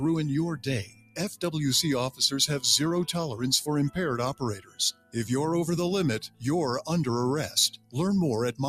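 A speech-oriented noise suppressor was left running on non-speech audio, so it treats sustained tones, ambience and decaying tails as noise. Throughout the clip its gain rides up and down by around 10 dB, making the sound pump and thin as held material sinks while attacks pass. In four spots the sound is cut by the noise suppressor more deeply, at 0.84–1.18 s, 4.34–5.16 s, 6.25–6.44 s and 7.73–7.96 s. Level drops there by about 17, 16, 17 and 18 dB, and fading sound is chopped short.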